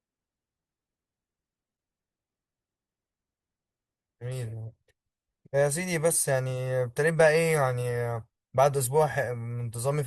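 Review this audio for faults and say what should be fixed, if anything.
The speech opens as an adaptive stream starting at a low bitrate. From 0.0 to 2.0 s the treble is dull and thin, and coding artefacts are stronger. At 2.0 s the quality jumps up with no gap in the sound. The player began on a cheap version of the stream so playback could start fast. It moved up once it had measured the connection. The sound fits a step from about 32 to 64 kbit/s Opus. To prevent it, start on a higher rung of the bitrate ladder, or use a faster initial bandwidth estimate.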